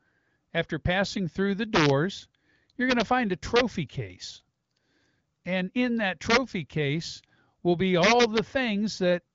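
Integer overflow hits the speech at 1.75–1.90 s, 2.91–3.02 s, 3.56–3.61 s after "find a", 6.30–6.37 s between "in that" and "case will be", and 8.03–8.39 s after "case will be". Peaks pushed only about 2 to 5 dB past full scale wrap to the opposite extreme instead of limiting, so they sound like harsh cracks rather than clipping. On the waveform, crests jump abruptly to the opposite sign. A spectrogram shows broadband vertical streaks rising to the 7.4 kHz ceiling of the AMR-WB coding.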